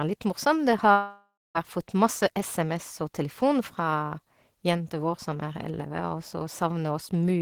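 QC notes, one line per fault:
0.91–1.58 s, long network dropout: the speech stops and the final sound is stretched into a buzzy, fading tail, followed by about 240 ms of silence before speech resumes mid-stream at 1.58 s, with roughly 0.64 s of material never heard. The likely cause is a gap in arriving packets that the receiver concealed by extending the last audio. On a spectrogram, repeated harmonic smearing thins into an empty band. On the waveform, the envelope decays to flat, then speech restarts abruptly.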